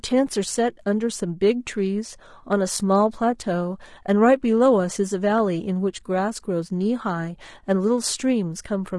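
Throughout the whole speech clip the voice sounds rough and grainy, with noise filling the gaps between pitch harmonics and a thin top band. This is likely low-delay AAC compression (AAC-ELD), whose short frames blur harmonics, and the damage fits a rate near 32 kbps.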